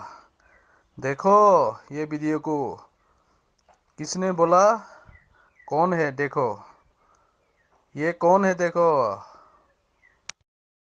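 No technical faults can be heard anywhere in this audio.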